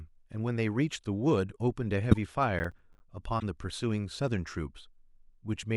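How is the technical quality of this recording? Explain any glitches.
The speech has three audible faults in its middle: two short decoding glitches and one stretch of crackle.

A corrupt frame decoded appears twice, at 2.11 to 2.17 s and again at 3.39 to 3.43 s. The first spans what sounds like a couple of codec frames, the second about one. Damaged bits in each compressed frame were decoded as if valid, so misread gains and codes put energy at the wrong frequencies. The result is a brief chirp or blip lasting only as long as the damaged frames.

Processor overload crackle runs from 2.59 to 3.00 s. The processor repeatedly failed to finish small audio buffers on time. Each missed deadline dropped in a short hole of silence with hard edges, and the gaps fit buffers of around 10 ms, with several misses in that span. Strung together, these dropouts sound like a gritty, tearing crackle over the speech that stops once the load clears.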